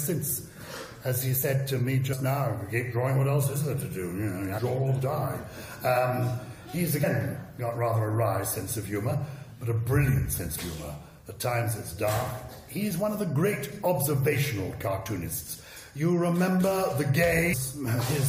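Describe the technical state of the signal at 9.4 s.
At 9.4 s the audio is intact, with no dropout, distortion or other fault.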